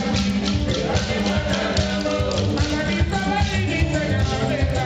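Throughout, a regular tick at 10 Hz marks a resampler restarted on every block. Each 100 ms block, likely converted from 16 kHz to 48 kHz, is resampled alone, leaving edge errors. Unlike dropouts, nothing is missing, and unlike hum, the ticks vanish without signal.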